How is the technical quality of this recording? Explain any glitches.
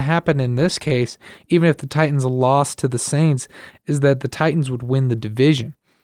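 No glitches turn up anywhere in this recording, so there's nothing here to explain.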